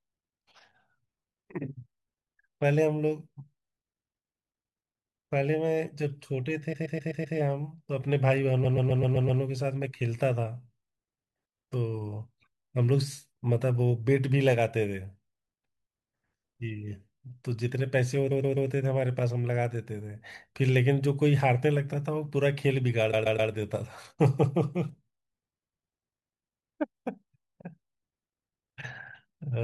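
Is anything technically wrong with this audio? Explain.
Yes. There are repeated frames at 6.72 to 7.36 s, 8.64 to 9.41 s, 18.30 to 18.69 s and 23.12 to 23.51 s. A 128 ms block of speech plays again and again, five, six, three and three extra times, which sounds like a stutter. Each repeat lengthens the audio by that much.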